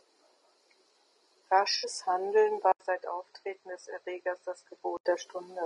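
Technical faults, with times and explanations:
throughout: low-delay AAC compression. The encoder, likely AAC-ELD at a rate fitting about 32 kbps, works in short low-delay frames and has too few bits at this rate to code the spectrum accurately, so the speech sounds plainly rough and grainy, with noise filling the gaps between harmonics.
1.77–1.87 s: AAC frame loss with concealment. About 60 ms of coded audio, which fits three lost frames, never reached the decoder, so it rebuilt the gap from the last good spectrum. The result is a brief smeared, noisy patch rather than clean speech.
2.72–5.05 s: input switched to a poorer device. The recording jumps to a narrower-band input, likely another microphone or headset profile, after an 80 ms silence at the switch. Nothing above 8.5 kHz survives, the level drops a few decibels, and a faint new noise floor appears.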